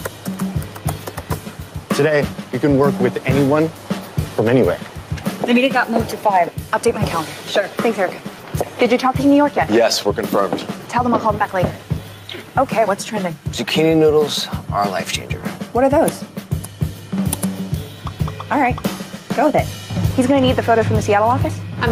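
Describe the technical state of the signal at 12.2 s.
At 12.2 s the signal shows gain pumping, and it runs through the whole clip rather than just this moment. The level is not steady. The background rises in the gaps and sinks each time a loud sound arrives, a swing of roughly 5 dB. Loud and quiet passages sit unnaturally close together, so the sound feels squashed. The likely cause is input gain set far too high, with a fast limiter or compressor clamping it on every peak.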